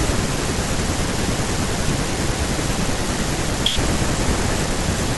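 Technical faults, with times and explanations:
No technical faults are audible anywhere in this speech recording.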